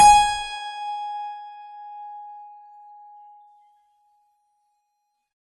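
A music clip that sounds dull and smeared from start to finish, with a warbling, fizzy texture clinging to sustained tones and a hard ceiling on the treble, since nothing is heard above 12.4 kHz. The likely cause is AAC compression, in its AAC-LC form, starved of bits so that fine spectral detail is quantised away, bands go hollow or get filled with substitute noise, and the top is cut off. The damage is plainly audible and points to a rate of around 32 kbps.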